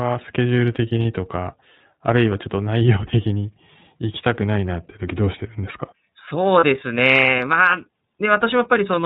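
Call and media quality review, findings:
iLBC codec, whole clip: band-limited, slightly rough, synthetic speech. Spectrogram shows nothing above 4 kHz. Narrowband frame-independent excitation coding, consistent with the 13.33 kbps, 30 ms-frame mode.

Lost iLBC frames, 1.02–1.05 s and 6.60–6.64 s: brief held buzzy vowel. Spectrogram shows smeared, repeated pitch harmonics. Packet loss concealment consistent with one dropped 30 ms frame each, recovering immediately after.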